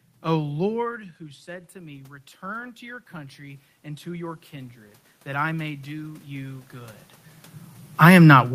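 It's a speech clip, and from about 0.81 s to 7.07 s you can hear automatic gain rising: the talker drops back around half a second in, the level falls by about 16 dB, and the gain control slowly lifts it about 15 dB, dragging the room noise up too.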